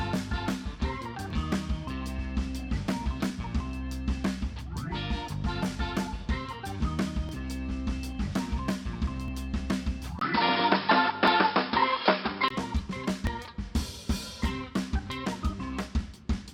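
At 1.30 s the first overlap between stream segments appears: two segments' time stamps overlapped, and the player trimmed a few milliseconds of audio that was never duplicated, so the waveform jumps discontinuously. It is heard as a small click or skip. The same fault returns at 7.29 s and 9.28 s, spaced at whole multiples of 2 s, which matches the 2 s segment length. On a waveform each one is a sudden step. On a spectrogram each is a thin vertical broadband line.

At 10.19 s a 20 ms gap of silence marks the start of an input switched to a poorer device, most likely a change to a different microphone or a headset's call profile. Until 12.50 s the sound is dull and boxy. The spectrogram shows a hard ceiling with nothing above 5.3 kHz, a new noise floor roughly 50 dB under the signal, and a level shift of about 5 dB, which appears as a visible step in the waveform envelope.

The segment overlaps keep their rhythm through and after the switch. 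There is one at 11.28 s inside the narrowed section, and a last one at 13.27 s. Each is the same brief skip and the same sharp vertical spectrogram line.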